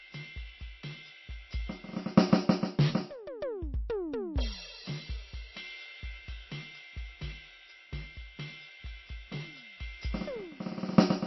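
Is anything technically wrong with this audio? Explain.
Yes. MP3 compression damage runs throughout the music, with nothing above 5.8 kHz and a plainly watery, swirly texture. A likely bit-starved encoder cut the treble at a fixed point and switched weak frequency lines on and off between frames, which fits roughly 24 kbps.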